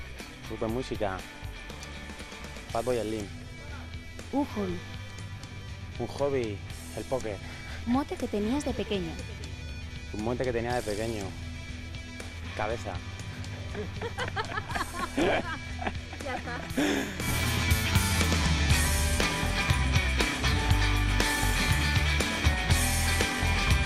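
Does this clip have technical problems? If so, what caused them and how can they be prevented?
Yes. The audio was likely squeezed through MP2 compression at too low a rate; the damage fits a bitrate around 80 kbps. MPEG Layer II divides the signal into 32 equal sub-bands and shares out a fixed bit budget, so at this rate upper bands get dropped and the rest are coarsely quantised. Throughout the clip the sound is dull and carries a gurgling, grainy distortion as bands drop in and out. Encoding at a higher bitrate, or with a more efficient codec, prevents it.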